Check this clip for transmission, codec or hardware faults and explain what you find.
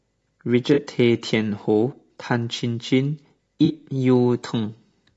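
There are two problems in this speech: a codec layer over the whole clip, and two short dropouts that the decoder papered over.

The low-delay AAC compression runs throughout and is plainly audible. The speech sounds rough and grainy, with noise filling the gaps between harmonics and a synthetic-sounding top band. That's likely AAC-ELD, whose short frames resolve pitch poorly, and the damage fits a bitrate of around 32 kbps.

There is AAC frame loss with concealment at 0.73–0.79 s and again at 3.65–3.71 s. Each time, about 40 ms of audio goes missing, which fits two lost frames. The decoder rebuilt each gap from the last good spectrum, so you hear a brief smeared, noisy patch.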